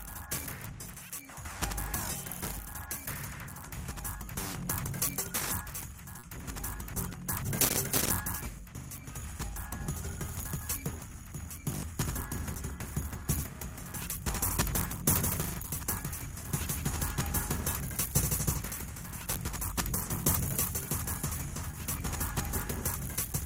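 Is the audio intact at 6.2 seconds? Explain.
No, not quite. From about 6.19 to 6.25 s there's a short concealed packet loss, where roughly 40 ms of audio arrived too late for the decoder. The receiver patched the hole by extending what came just before, carrying on its pitch or its noisy texture, and then eased back into the real signal. What you hear at that spot is a tiny smear or wobble instead of the actual sound.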